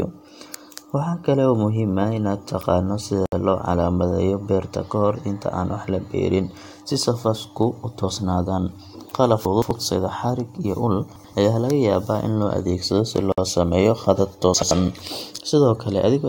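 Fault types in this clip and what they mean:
Gap at a join of encoded pieces: Separately encoded sections were spliced without trimming encoder delay and padding. The speech drops out for about 65 ms at 3.26 s and 54 ms at 13.32 s, then resumes where it stopped. The gaps recur every 10 s.
Chunks out of order: Short blocks of audio, each about 85 ms, play later than they should. This happens at 9.45 s, 11.16 s and 14.54 s. The first block is two chunks late, the others one. Each spot sounds jumbled.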